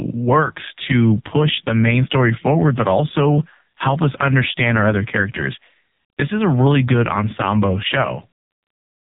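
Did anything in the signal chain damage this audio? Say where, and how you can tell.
Yes, and it's the codec stage: the whole clip has been through AMR narrowband mobile coding. The speech stops dead around 3.8 kHz for the full length, so there's no air or sibilance left, and the voice comes across buzzy and synthetic. The damage is heavy enough to point to one of AMR-NB's lowest modes, around 5 kbps, where a few pulses per subframe drive the vocal-tract model and most of the natural texture is lost.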